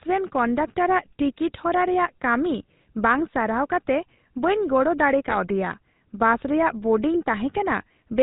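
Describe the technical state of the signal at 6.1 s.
At 6.1 s the speech carries GSM full-rate codec damage, present through the whole clip. A vocal-tract model driven by a regular pulse excitation yields a buzzy, gravelly roughness that plain band-limiting lacks, with nothing above 4 kHz, which fits a 13 kbps GSM stream.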